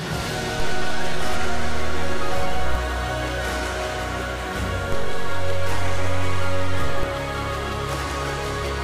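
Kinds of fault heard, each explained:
DC step: The zero line of the waveform jumps off centre by an offset of about -15 dBFS, holds there for a couple of seconds, then drops back, twice: from 0.60 to 2.75 s and again from 4.92 to 7.03 s. You hear a low thump or click at each jump and each return, four in all, while the sound itself carries on unchanged through the shifted stretches.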